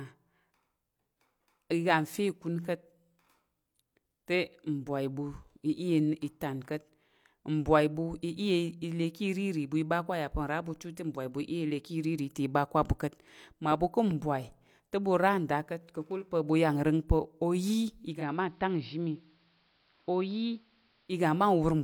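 Digital reception fails at 18.1 s, triggering digital radio blending to analogue AM over 150 ms. Until 21.2 s, speech is about 3 dB quieter, dull in the treble, and faintly hissy.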